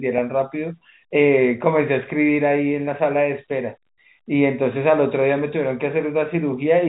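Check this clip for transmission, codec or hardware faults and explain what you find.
No transmission, codec or hardware faults are audible here.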